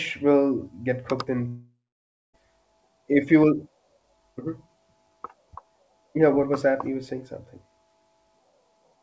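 From 1.48 s to 2.35 s the speech breaks off. The last sound is stretched into a fading buzz, then about 0.57 s of near silence follows. When the voice returns, roughly 0.86 s of speech is simply gone. This is a long network dropout, likely caused by packets that never arrived. The receiver smeared the final fragment to cover the gap, then gave up. The whole clip also stops at 8 kHz, which fits a wideband call codec such as G.722.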